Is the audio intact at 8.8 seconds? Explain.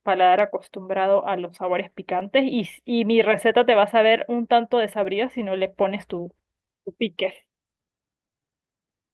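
No. At 8.8 seconds the audio sits inside a run of repeated timing corrections that lasts from 0.24 to 9.03 s, so this moment is one of many small edits rather than an untouched stretch. The receiver keeps repeating short slices of the speech to stay in step, which slows delivery to about 98% speed and stretches the passage by something like 150 ms overall. Each insertion is tiny, heard at most as a faint hiccup or a slightly dragging, uneven tempo.

The underlying cause is clock drift between sender and receiver. The sender's clock runs roughly 3% slow, so the jitter buffer keeps draining and has to be topped up with repeated material at irregular intervals across the whole clip. Unlike packet loss or a dropout, there is no burst of noise or single damaged spot. The edits all push the same way, lengthening the audio, and they recur steadily but unevenly. The Opus call path shows up only as ordinary coding texture, with the top end limited to about 12 kHz.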